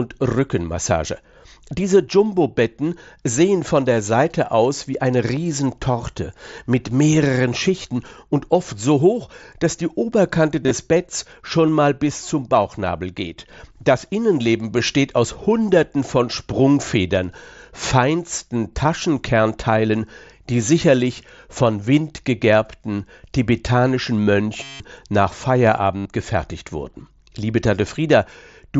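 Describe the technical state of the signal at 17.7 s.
At 17.7 s the speech is intact, with no fault at that moment, only the band limit near 8 kHz and light grain of the Bluetooth mSBC headset codec.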